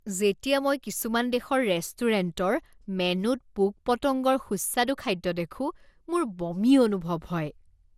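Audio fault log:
throughout, generation loss: the speech was likely re-encoded about four times through a lossy codec, fitting MP2 near 96 kbit/s. Each pass requantises on a shifted frame grid, so noise and spectral holes accumulate into a swirly, hollow smear with blurred consonant attacks and nothing above 16.7 kHz.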